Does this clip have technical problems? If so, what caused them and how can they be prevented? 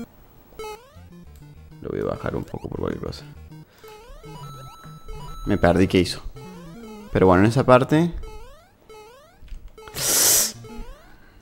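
No, no technical problems audible.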